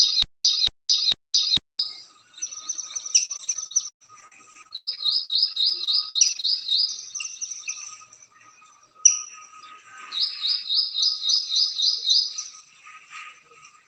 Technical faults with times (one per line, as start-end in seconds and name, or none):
0.00-1.79 stutter with silent gaps
3.25-6.63 repeated packet loss (robotic sound)